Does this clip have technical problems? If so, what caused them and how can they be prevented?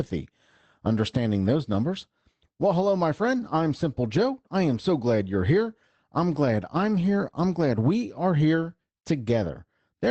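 No, no technical faults here.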